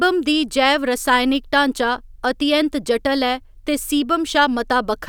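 Nothing in this speech recording stands out as a technical fault; it just runs along with no dropouts, glitches or distortions to point to.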